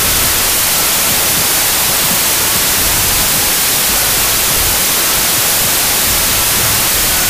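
A wrong sample width runs through the whole clip. The data are read with three bytes a sample where two were written, which fits 16-bit audio read as packed 24-bit. Most values mix bytes from neighbouring samples, giving loud noise with the original sound buried in it, playing 1.5 times too fast and high.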